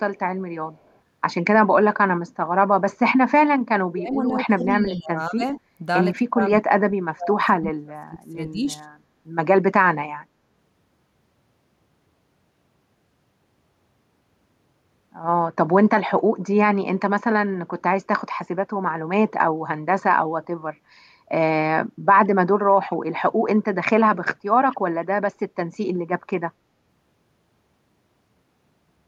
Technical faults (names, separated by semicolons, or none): echo leak; speech suppressed in double talk